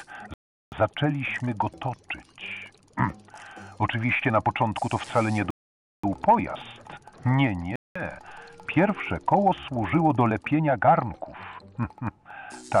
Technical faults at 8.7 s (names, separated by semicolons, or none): none